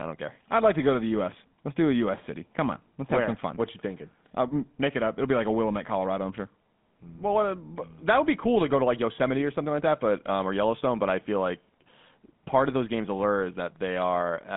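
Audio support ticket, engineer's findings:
GSM full-rate codec, whole clip. Speech sounds buzzy and gravelly, clearly audible. Line band roughly 150 Hz to 3.6 kHz, nothing above 3.8 kHz. Pulse-driven vocal-tract model with thinned excitation, which fits the old 13 kbps GSM full-rate path.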